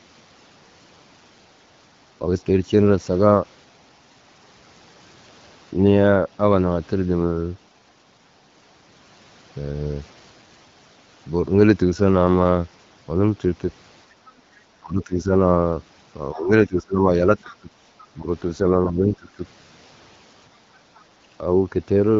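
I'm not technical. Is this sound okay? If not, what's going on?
No. From 14.12 to 14.54 s the room background dips for under half a second. This is background gated by the echo canceller, which turns the microphone down while the loudspeaker plays.

The talker's voice dips or cuts out in pieces at 14.82–15.29, 16.32–17.70, 18.14–18.28 and 18.63–19.41 s. This is likely speech suppressed in double talk, where both sides spoke at once and the canceller turned down everything.

Faint scraps of a second voice come through at 17.37–17.56, 18.00–18.06 and 20.95–21.04 s. This is likely the other side's voice leaking through, where loudspeaker sound wasn't fully removed from the microphone.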